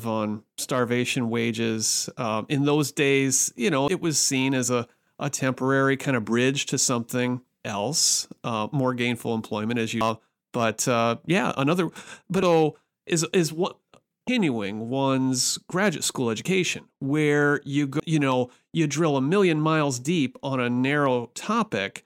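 A chirp, squawk, click or short hole breaks into the speech at 3.88, 10.01, 12.43, 14.28 and 18.0 s. Each is damaged data in a compressed stream: corrupted bytes made the decoder misread its frames and lose sync until it found the next valid frame header.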